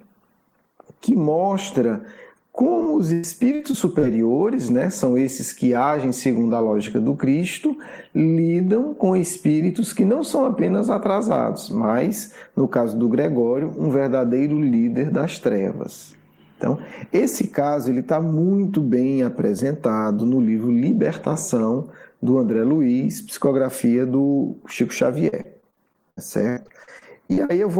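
From 2.83 to 4.05 s and again from 25.29 to 27.51 s, repeated packet loss (robotic sound) chops the audio. Short holes, up to about 0.1 s, are patched by stretching the last sound, giving a choppy texture.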